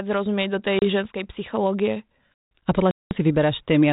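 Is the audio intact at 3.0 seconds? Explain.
No: packet loss on an ADPCM call leaves a hard-edged 200 ms silent gap from 2.91 to 3.11 s. The waveform goes flat and the spectrogram goes blank. When the sound resumes, the decoder's predictor has lost track, causing slight distortion until it settles.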